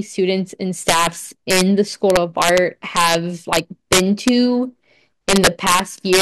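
Integer overflow cracks the speech at 0.89–1.07, 1.51–1.61, 2.10–2.58, 2.97–3.15, 3.53–4.29 and 5.29–6.21 s. Peaks driven about 4–7 dB past full scale wrap to the opposite sign, producing harsh snaps far sharper than clipping.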